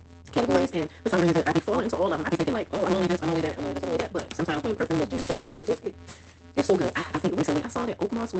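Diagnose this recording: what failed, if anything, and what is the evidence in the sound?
Block size mismatch (truncated) at the driver or buffer stage: a steady 172 Hz buzz throughout, with audio running 1.88 times fast with its timbre kept. Each block's tail is discarded, which fits 256-sample reads.

Short concealed packet loss on the network: brief smears at 5.15–5.19 s and 5.21–5.27 s. The receiver bridged the 20 ms and 40 ms gaps by extending the preceding sound.

From 5.31 to 5.65 s the sound becomes a fading synthetic continuation and never reaches silence. It then resumes with material missing, likely a long network dropout concealed over about a third of a second.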